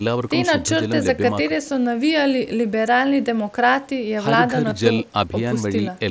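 At 4.70 s there is a concealed Bluetooth headset packet loss lasting about 15 ms, which fits two consecutive lost mSBC packets. The receiver filled the gap by repeating the best-matching stretch of the preceding waveform, so the speech holds briefly as a buzzy tonal patch within the 8 kHz headset band.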